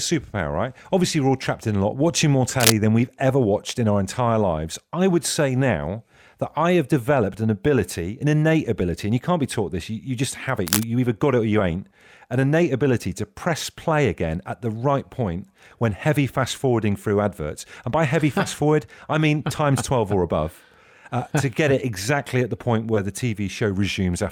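At 2.57 s, between "a lot watching more" and "than we've ever watched", a burst of cable scratch noise runs for about 0.16 s, a rough, crackling rustle sitting a little above the speech level. The likely cause is a worn cable or connector being moved, so its contact resistance jumps erratically. A second burst at 10.67 s, lasting about 0.17 s between "you just have it" and "either got it or", sits at roughly the same level as the speech.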